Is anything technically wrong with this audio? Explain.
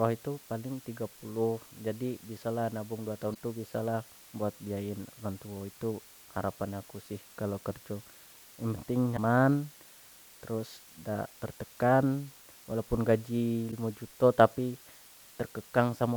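Yes. Two faults are audible in this speech.

Low bit depth with dither runs through the whole clip. A steady, even hiss sits under the speech, roughly 25 dB below it. The noise level fits an 8-bit signal. With so few bits, each sample is rounded coarsely. Dither added before that rounding turns the rounding error into constant white noise. That is why the hiss stays flat and the speech shows no harsh distortion.

Damaged data in a compressed stream causes three short glitches. They fall at 3.31 to 3.36 s, 9.13 to 9.19 s, and 13.68 to 13.73 s. The last sits between "tertekan walaupun gaji" and "juto tapi". Each lasts about 56 ms. Some of the encoded data is wrong at those points. The decoder misreads the broken frames and loses its place until it finds a valid frame again. Each event is heard as a brief chirp, squawk, click or short hole.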